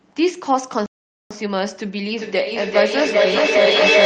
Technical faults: playback stall; feedback echo between two devices

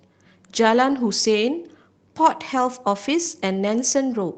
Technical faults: lost packet rebuilt from error correction

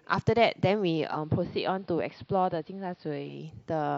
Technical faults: digital radio blending to analogue

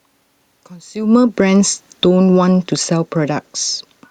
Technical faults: automatic gain falling

